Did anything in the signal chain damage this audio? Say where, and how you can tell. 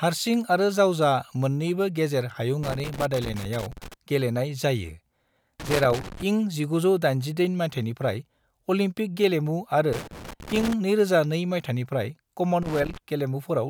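Yes. Loose connector crackle in the analogue wiring breaks up the speech four times: 2.63–3.94 s, 5.60–6.23 s, 9.93–10.73 s and 12.62–12.97 s. Each episode is an irregular burst of scratching and crackle laid over the voice. A worn or dirty contact in a cable or jack is making and breaking as it shifts, chopping the signal on and off, with pops where any DC on the line steps.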